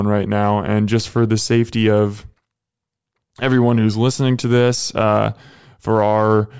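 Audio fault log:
Nothing to log here; I didn't hear any faults anywhere in this speech recording.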